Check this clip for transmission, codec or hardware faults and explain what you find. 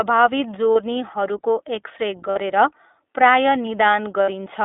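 Two faults are audible: narrowband iLBC coding across the whole clip, and three short dropouts filled in by lost iLBC frame concealment.

The iLBC codec shapes the entire speech clip. The passband runs only from about 250 Hz to 3.6 kHz, so the speech is thin and boxy. The codec damage is plainly audible as a rough, slightly synthetic grain, which fits iLBC's 15.2 kbps mode with 20 ms frames. Each frame's excitation is coded independently of the frame before. Simple band-limiting would dull the sound without adding this roughness.

Lost iLBC frames occur at 0.72–0.78 s (40 ms), 2.30–2.38 s (60 ms) and 4.22–4.30 s (60 ms). These lengths fit two, three and three missing 20 ms frames. The decoder fills each gap by repeating the last pitch cycle mixed with noise, so the gap sounds like a briefly held, breathy vowel rather than silence or a click. The voice is right again almost at once after each gap because iLBC frames do not depend on earlier ones. 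A predictive codec would leave a smeared recovery instead.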